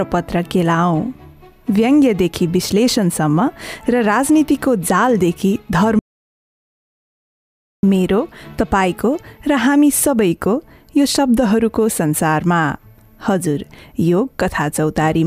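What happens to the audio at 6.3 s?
The input feed was likely lost, through a disconnected device, failed link or stray mute, while the recorder kept writing zeros, producing an audio dropout to silence from 5.99 to 7.83 s. The sound cuts off abruptly, leaving about 1.84 s of dead silence with no room tone, then resumes mid-flow.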